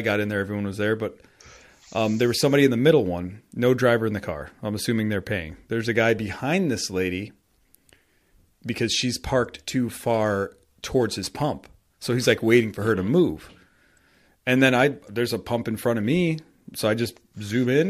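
From 10.04 to 12.93 s, after "because she's parked too" and before "to move", crude rate conversion by dropping or repeating samples, consistent with 48 kHz to 44.1 kHz, adds a gritty inharmonic fizz to the speech, roughly 30 dB down.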